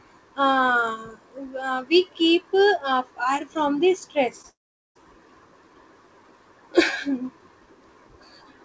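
At 4.42 to 4.45 s, about 20 ms of packets arrived too late for the decoder. This is a short concealed packet loss: the receiver extended the preceding sound to bridge the gap, heard as a brief smear or wobble in the speech, band-limited below 8 kHz by the G.722 call path.

From 4.49 to 4.97 s the audio breaks off for nearly half a second, most likely a long network dropout in which no packets reached the receiver. A short fading continuation of the last sound gives way to about 0.42 s of silence, and the speech resumes later with that stretch lost.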